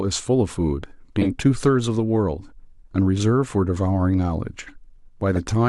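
Damaged bits reached the decoder, which played the frames anyway, so a corrupt frame was decoded at 1.21 to 1.27 s and again at 5.35 to 5.39 s. Misread gains and codes throw energy into the wrong frequencies, giving brief bursts peaking around -10 and -15 dBFS.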